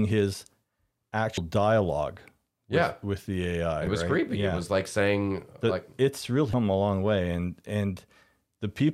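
Three 30 ms disruptions break the speech, at 1.35–1.38 s, 3.84–3.87 s before "it was right creepy", and 6.51–6.54 s before "a long way". They come from damaged data in a compressed stream: the decoder misreads those frames, loses sync and seeks the next header.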